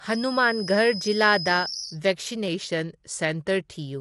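Low-delay AAC compression runs through this whole speech clip. The speech sounds plainly grainy and rough, with noise filling the gaps between harmonics and nothing above 11.6 kHz. This is likely an AAC-ELD encode at a low bitrate, around 32 kbps, where too few bits are spread over the frame's frequency lines. A feedback whistle at 5.2 kHz sits under the speech from 0.0 to 2.0 s, roughly 10 dB below it. It is likely a loudspeaker-to-microphone loop held just short of howling, so one high tone keeps ringing at one pitch, swelling and fading slowly. A drift correction step runs from 2.48 to 3.73 s, where speed drops by 5.54% and pitch falls about 99 cents, nearly a semitone, before snapping back. That points likely to clock-matching software resetting the playback rate in a single step to rebalance its buffer.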